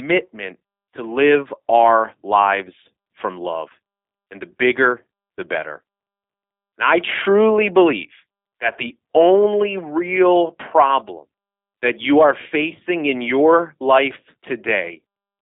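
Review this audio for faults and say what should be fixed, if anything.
The call path ran the speech through a G.729 codec for the whole clip, rebuilding it from a vocal tract model and a handful of pulses per frame, which fits an 8 kbit/s G.729A coder. Nothing passes above 3.5 kHz or below about 250 Hz, and the voice comes out plainly rough and synthetic. To prevent it, carry the audio over a wideband or higher-bitrate codec instead of G.729.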